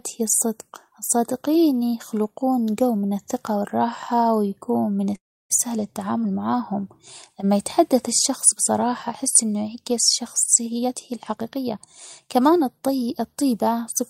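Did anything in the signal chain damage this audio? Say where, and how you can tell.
Yes. Network and jitter buffer: at 5.15 to 5.52 s a call audio freeze stretches the last sound into a fading buzz, then about 0.31 s of silence. That points to packets that were likely held up, leaving the buffer empty. The audio resumes where it stopped, so unlike a dropout nothing is lost.

Jitter buffer: from 10.69 to 13.21 s a jitter buffer speed-up trims pitch periods, running at 113% speed and shedding about 0.3 s. Pitch stays put, unlike a sample-rate mismatch.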